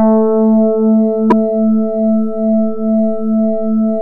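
The likely cause here is a broken MP3 bit reservoir. Frames appear to have been cut from the stream, so the frame after the cut looks back to earlier frames for its data and decodes bytes belonging to a different frame. In this audio, that produces a brief disruption from 1.29 to 1.33 s. It lasts about 33 ms, close to one 26.1 ms frame, and the audio lurches forward across that point instead of running continuously.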